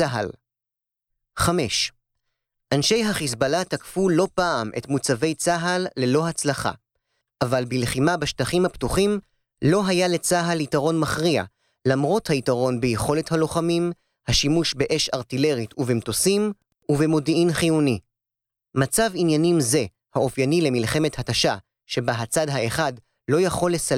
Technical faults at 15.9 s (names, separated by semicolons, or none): Wi-Fi interference